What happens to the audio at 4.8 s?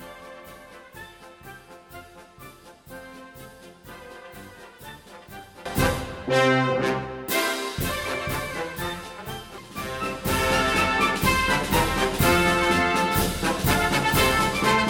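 At 4.8 s the audio sits inside a stretch from 0.0 to 5.66 s where it sounds faint and about 19 dB quieter, with the content common to both channels largely gone. The likely cause is one channel inverted: with one side's polarity reversed, the content shared by both channels cancels when they are summed, leaving only their difference. On a spectrogram the energy fades across that span, and the waveform shrinks sharply until it recovers after 5.66 s.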